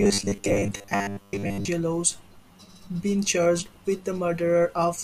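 From 0.01 to 1.68 s the speech turns into robotic sound from repeated short buffers, a rigid metallic buzz fixed at 100 Hz. This likely comes from a 10 ms buffer looping for most of that stretch while new audio is skipped. The buzz stays locked at one pitch rather than following the speaker's intonation, which separates it from codec warble.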